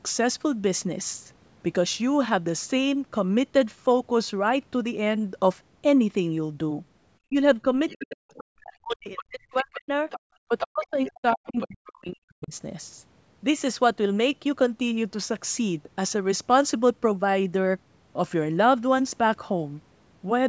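From 7.29 to 9.92 s and again from 10.47 to 12.54 s, the speech is suppressed in double talk, dipping by roughly 40 dB in places, likely because the echo canceller ducked the talker while the far side spoke. The other side's voice leaks through as faint scraps about 15 dB below the speech at 7.89–8.16 s, 8.89–9.25 s, 10.1–10.2 s and 11.45–11.65 s, and more strongly, about 5 dB below, at 10.58–11.09 s. This likely comes from loudspeaker echo that was not fully cancelled.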